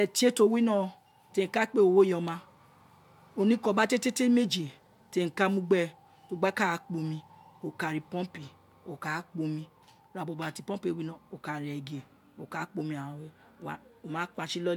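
Nothing in this speech recording stands out as a technical problem; there's no point where anything goes wrong with the audio.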